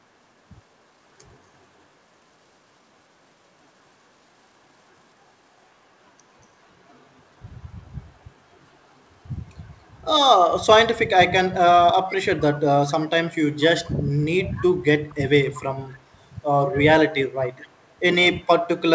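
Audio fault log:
14.17–14.66 s, 15.09–15.15 s, 15.54–15.62 s, 15.93–15.99 s, 17.6–17.94 s, 18.42–18.47 s, echo leak: faint scraps of the speech return 236 ms late, from about 20 dB to about 40 dB below it, likely loudspeaker pickup escaping the far end's canceller. On a spectrogram, faint repeats of the speech's harmonic bands appear shifted about 0.24 s right.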